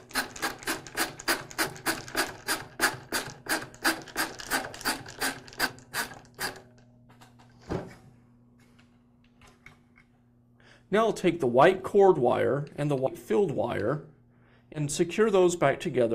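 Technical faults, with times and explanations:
1.66 s, 5.65–5.69 s, 13.06–13.10 s and 14.74–14.79 s, compressed frames skipped: brief skips where the sound jumps ahead by roughly 40 to 100 ms, most at 13.06 s. Whole frames, fitting a 10 ms frame length, were missing or rejected as damaged.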